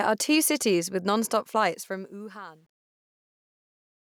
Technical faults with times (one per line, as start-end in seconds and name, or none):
1.63-4.06 truncation distortion on a fade